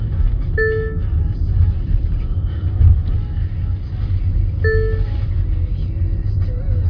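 No technical faults are audible.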